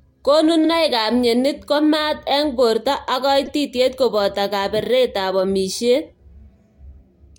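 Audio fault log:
0.64–0.68 s, repeated frames: a 46.4 ms stretch, consistent with two compressed frames, plays a second time. The result is a stutter, and the clip grows by that amount rather than losing any audio as a dropout would.
3.46 s, repeated frames: a 2.9 ms block repeats five extra times, adding 14.5 ms as a brief stutter.
4.84–4.87 s, repeated frames: a 34.8 ms block replays once, giving a short stammer.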